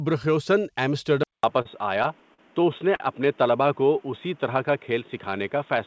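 Input switched to a poorer device at 1.23 s, most likely, in this speech recording: after a gap of about 200 ms the sound turns dull and boxy and stays that way to the end, with a narrower band than the G.722 call path, which had been carrying content up to 8 kHz. The level stays roughly the same, but a new, faint background noise sits well below the speech, pointing to a different microphone or a headset's narrowband call profile taking over. Short stall from a late packet at 1.62 s, 2.34 s and 2.95 s: each time a packet arrived late, the jitter buffer ran dry and the receiver held the last sound for 34 ms, 42 ms and 45 ms respectively before resuming exactly where it stopped. Nothing is lost, but each held sound lasts too long, and every stall adds its length to the overall delay. Jitter buffer slow-down from 3.62 s to 4.27 s: to rebuild its reserve, the receiver repeated single pitch periods and fragments of pauses, adding 50 ms. 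Speech runs at about 93% speed over that stretch with the pitch unchanged, so sounds feel drawn out.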